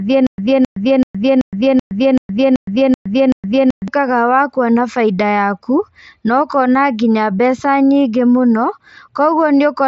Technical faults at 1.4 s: stutter with silent gaps

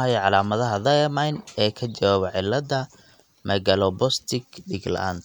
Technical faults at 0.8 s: none

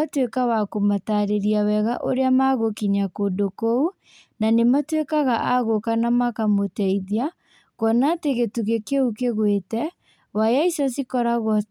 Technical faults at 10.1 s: none

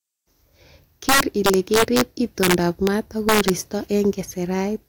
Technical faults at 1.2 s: integer overflow

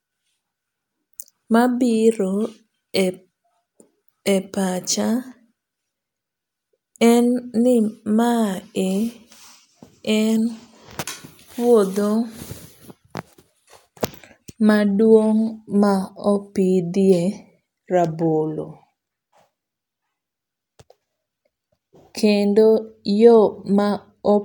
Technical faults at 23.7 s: none

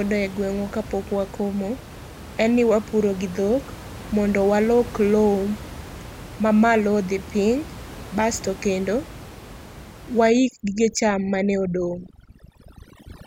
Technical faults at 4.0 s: none

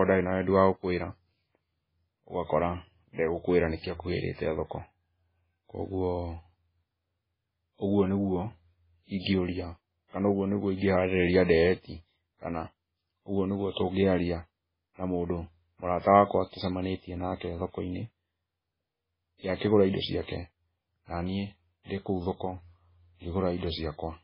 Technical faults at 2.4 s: MP3 compression

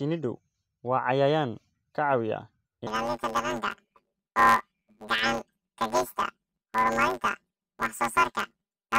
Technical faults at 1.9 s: none

